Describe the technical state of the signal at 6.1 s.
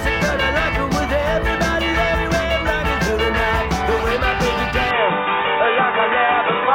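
At 6.1 s the input has likely switched to a poorer device, from 4.91 s to the end. Its narrower path passes nothing above 3.8 kHz, so the sound turns dull and boxy, with no gap at the switch and faint new noise about 40 dB down.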